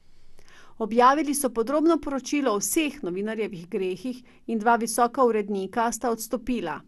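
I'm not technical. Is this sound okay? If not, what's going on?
No. The speech sounds dull and gurgly from start to finish. There is a grainy, bubbling roughness on top of the speech, and nothing is heard above about 12.2 kHz, so the crisp top end is missing. This is likely MP2 compression, the kind used in some digital radio. It splits sound into narrow slices and saves space by dropping or roughly approximating the high ones. Here the damage is plainly audible.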